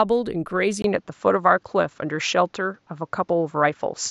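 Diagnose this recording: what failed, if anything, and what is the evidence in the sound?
Input likely switched to a poorer device (driver stage) at 0.82 s: after a 20 ms gap, speech stops above 7.6 kHz, level shifts about 5 dB, and faint new noise appears.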